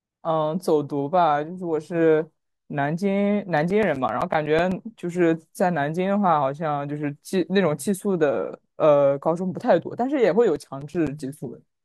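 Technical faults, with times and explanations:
3.57–4.84 s, CD scratch ticks: eleven short ticks arrive at a steady rate of roughly nine a second, the longest around 10 ms. A scratch corrupts more data than error correction can rebuild on each turn of the disc, so the player patches or mutes those samples. The even spacing sets it apart from random crackle or single digital clicks.
10.43–11.45 s, CD scratch ticks: nine more ticks at about the same rate, the longest under 10 ms. The rhythm matches the earlier run, which points to the same rotational cause rather than scattered glitches.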